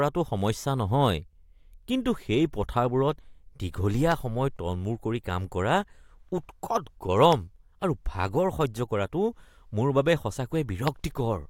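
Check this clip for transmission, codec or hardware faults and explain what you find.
Three hardware clicks stand out in the speech. Loud pop at 4.12 to 4.14 s, just before "সময় তলমূৰ কৰি কাম", again at 7.33 to 7.35 s and 10.88 to 10.90 s: likely a voltage spike from a plug, switch or static, giving a single sharp pop about 15 dB above the speech, which continues underneath.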